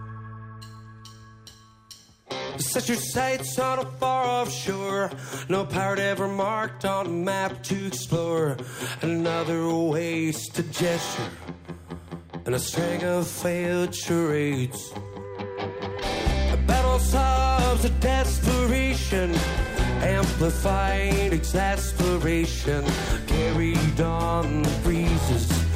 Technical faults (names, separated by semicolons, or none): imaging from linear upsampling